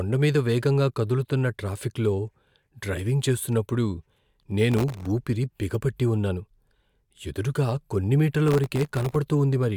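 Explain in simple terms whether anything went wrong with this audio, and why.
The computer processing this speech fell behind twice, missing dozens of deadlines for its tiny, under-a-millisecond audio chunks. Each miss left a hairline gap of silence, heard as processor overload crackle from 4.72 to 5.07 s, just before "ఊపిరి బిగపట్టి ఉన్నాను", and from 8.48 to 9.16 s, right after "ఎదురుగా కొన్ని మీటర్ల".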